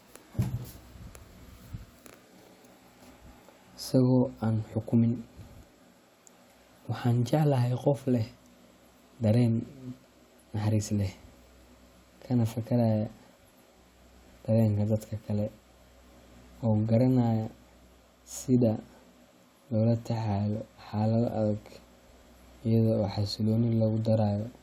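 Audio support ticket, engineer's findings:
No audible faults found on this speech recording.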